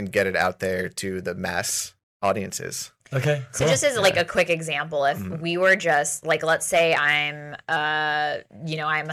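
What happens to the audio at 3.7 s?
Nothing goes wrong at 3.7 s; the speech carries on intact through that moment.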